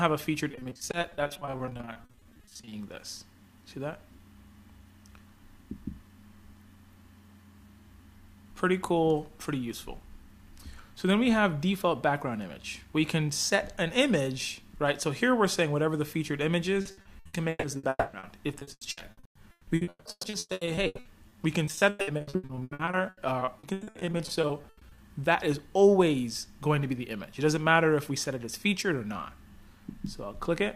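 Between 0.51 and 2.73 s, audio packets went missing or arrived too late over and over, and the receiver patched each hole by extending the sound just before it. This is repeated packet loss, heard as a robotic, choppy texture. About 40 percent of the stretch is filled-in sound. No single hole runs past 40 ms, so the effect is a rapid stutter with small pieces of the audio gone.

The same repeated packet loss returns from 16.81 to 24.99 s. Again roughly 39 percent of the span is concealed, about 3.2 s of the sound in total. Here the holes run as long as 160 ms, so the choppiness is coarser, with longer smeared patches where the real audio is missing.

Within that stretch, from 17.89 to 18.15 s, the sound holds as a fading smear of the last audio for about 240 ms, drops to silence for about 30 ms, and then resumes with that portion lost. This points to a likely long network dropout, with nothing reaching the receiver for that moment.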